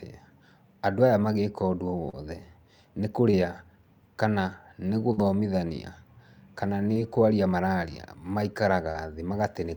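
Around 2.09 to 2.15 s there's a short concealed packet loss: about 40 ms of the speech never arrived, and the receiver papered over it by extending the last sound, so you hear a quick smear. The same thing happens at 3.31 to 3.35 s, with about 20 ms gone.

At 5.13 to 5.19 s there's a small burst of packet loss. Roughly 40 ms went missing, and the decoder stretched the previous sound over the gap while fading it down. Then the speech jumps ahead, with that stretch simply gone.

Two more short concealed losses follow. One at 6.93 to 6.97 s drops about 20 ms just before "kwaria mararia". The last, at 8.91 to 8.97 s, loses about 40 ms, and the patched-over bit has that same brief wobble.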